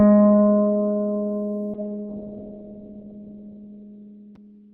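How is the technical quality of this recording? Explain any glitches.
The music starts out clean, but from 1.74 s to the end a call bitrate drop degrades it. The connection's bandwidth estimate fell, so the encoder was pushed to far fewer bits, which sounds like a fall from about 32 kbps to around 6 kbps. To save bits it narrows the audio band from 20 kHz to 4 kHz and quantises coarsely. The result is muffled, dull music with a rough, watery texture, at its worst for about 1.85 s.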